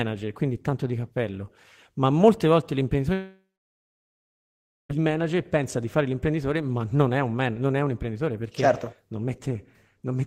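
From 3.13 to 4.91 s, likely a long network dropout: audio stopped arriving for about 1.76 s after "cappello ma molte volte". The receiver drags the last sound into a brief fading buzz, then 1.46 s of silence, and speech resumes at "manager pensa di fare" with the gap lost.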